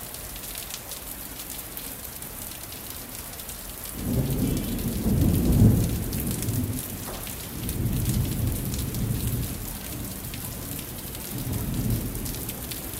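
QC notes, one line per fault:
Nothing stood out on listening to these sounds.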